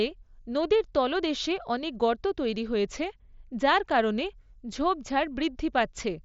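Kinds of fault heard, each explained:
No faults can be heard anywhere in the recording. The speech carries the sound of a wideband Bluetooth headset link on the mSBC codec, with nothing above about 7.7 kHz and only a light grain on the louder syllables.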